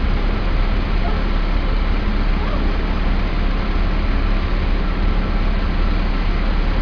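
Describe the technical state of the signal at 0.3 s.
At 0.3 s the signal is intact, with no dropout, distortion or other technical fault to be heard at that moment.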